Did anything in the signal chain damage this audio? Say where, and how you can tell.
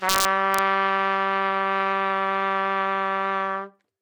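Yes. Integer overflow from 0.09 to 0.59 s, where the sound was driven about 2 dB past the integer limit. It points to a gain or summing stage in the sample-format conversion path that works in fixed-point arithmetic without saturation. Instead of being limited, each peak above the ceiling wrapped around to the opposite sign, so the waveform flips across its full range. That is heard as cracks on those peaks, sharper than ordinary clipping would produce.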